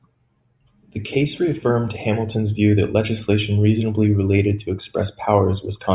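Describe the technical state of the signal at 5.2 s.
At 5.2 s the speech signal is intact, with no audible dropout, distortion, clipping or other technical fault.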